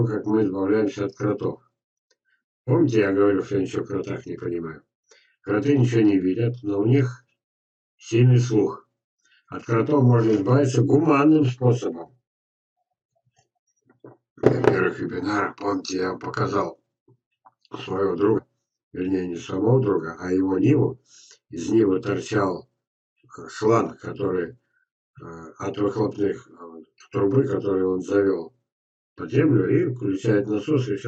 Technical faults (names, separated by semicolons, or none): damaged data in a compressed stream